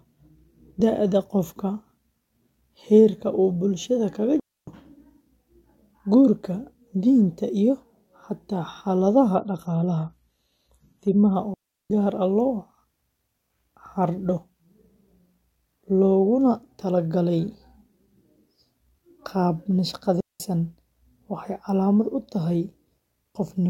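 A speech recording with two faults. A digital wireless link lost too much data three times, so the receiver muted into clean near-silent holes without noise bursts: 4.40 s (0.28 s), 11.54 s (0.36 s) and 20.20 s (0.20 s). From 9.35 to 11.35 s an adaptive stream at a lower bitrate took over after a slowdown. The treble vanishes above 14.1 kHz and codec artefacts rise, which fits a switch from roughly 96 to 32 kbit/s AAC.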